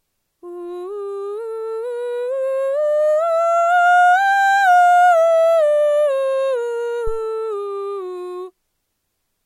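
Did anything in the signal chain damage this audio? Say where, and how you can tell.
Yes. In the analogue wiring at the input, a supply was switched while the input was live, producing a phantom power thump from 7.07 to 7.21 s during the music. The sudden voltage step passed through the coupling capacitors into the preamp, where it appears as a deep low-frequency bump peaking at about -13 dBFS. It then dies away with a decay of roughly 31 ms instead of continuing as part of the music.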